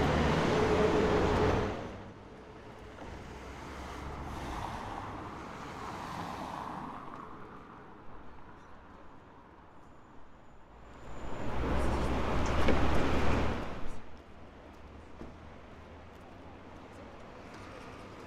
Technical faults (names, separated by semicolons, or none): none